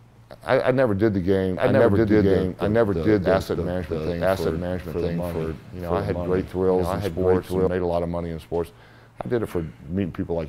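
From 1.57 s to 7.67 s a doubled audio track appears: a full-level copy trails by about one second, likely from a second, slower capture path.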